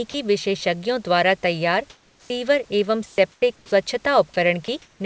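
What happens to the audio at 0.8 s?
At 0.8 s the audio is intact, with the speech passing cleanly through the call's G.722 coding, which leaves nothing above 8 kHz, and only the faint room noise, about 38 dB below the speech, beneath it.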